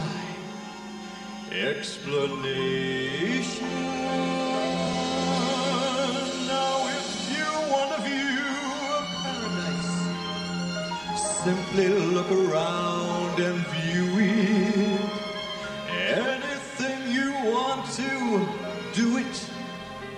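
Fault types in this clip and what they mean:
Channel delay (comb filtering): One channel arrives about 5 ms behind the other, and when the two are folded to mono, whatever they share cancels at regularly spaced frequencies. With that offset, the first notch lands around 100 Hz and further notches repeat roughly every 200 Hz above it. The sound comes across hollow and phasey from start to finish, with a fixed coloration.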